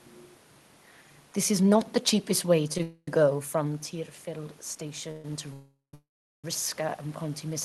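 At 2.54 s an automatic gain rise begins and runs to the end of the clip. The input fell by about 10 dB, and the gain control climbs to compensate, so speech and room noise swell together. On a waveform the envelope widens gradually. On a spectrogram the whole band, noise floor included, slowly brightens.

At 2.78 s there is a short stall from a late packet. The jitter buffer ran dry, and the receiver stretched the last sound for about 17 ms before resuming exactly where it left off, so nothing is lost. It is heard as a brief held sound with a slight buzz or dip. On a spectrogram it shows as a tiny horizontal smear.

Call audio freezes follow at 2.82–3.18 s, 5.11–5.25 s, 5.53–5.94 s and 5.94–6.45 s, likely from packets delayed in transit. The receiver extends the last sound as a fading buzz or hiss, lasting about 250, 130, 400 and 500 ms respectively. The first, third and fourth fade into silence lasting about 40, 160 and 410 ms. 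Speech then continues from the stopping point, pushed later in time rather than cut. A spectrogram shows frozen horizontal bands dimming into dark gaps. The waveform shows decaying blocks, then flat stretches.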